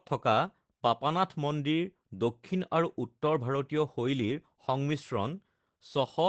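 Speech, and it's been through Opus voice compression the whole way through. Nothing comes through above about 8.8 kHz, so it has that dull wideband ceiling, and the damage is plainly audible: the voice sounds a bit hoarse and faintly robotic because the SILK coder is describing the excitation only roughly. That fits a low bitrate, somewhere around 12 kbps, which squeezes the detail out.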